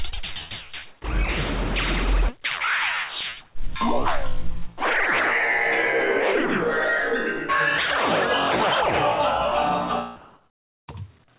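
From 1.02 to 1.04 s the sound briefly gives way to a short patch of steady noise, about 10 ms of it missing, likely sound dropped by the voice detector, which misjudged it as background and filled the gap with comfort noise. Between 3.21 and 3.68 s come three regular ticks, the longest only about 2 ms. These are CD scratch ticks, where a blemish defeated the disc's error correction once per rotation and the player patched over the damaged samples. From 10.16 to 10.88 s the real background, sitting about 42 dB below the loud parts, turns into a smooth, featureless hiss at the same level for 720 ms. That is likely comfort noise in place of the background, synthesized by the receiver while transmission paused. The whole clip is also band-limited to 4 kHz by the narrowband call codec.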